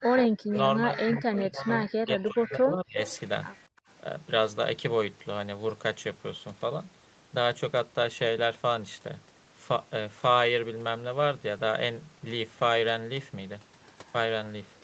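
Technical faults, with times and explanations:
0.00–2.98 s, speech suppressed in double talk: The talker's level collapses, with the deepest dips reaching roughly 40 dB down and about two seconds of the span affected in total. The likely cause is an echo canceller facing simultaneous talk from both ends, which cannot tell near speech from loudspeaker echo and attenuates everything.
0.19–0.24 s, 1.15–1.42 s, 3.03–3.20 s, 3.53–3.62 s, echo leak: Delayed copies of the voice surface in short scraps. The first trails by about 196 ms and the rest by about 234 ms. They start around 10 dB below the direct speech and weaken to about 30 dB below by the last occurrence. This is likely residual loudspeaker pickup at the far end that its echo canceller failed to remove, returned as echo.
3.68–3.87 s, background gated by the echo canceller: The room tone underneath the speech drops out abruptly by up to 32 dB for about a fifth of a second, then returns. 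This is the echo canceller clamping the microphone hard while it judges loudspeaker output to be present. Ambient noise is suppressed along with any presumed echo, producing a brief hole of near silence before the suppressor releases.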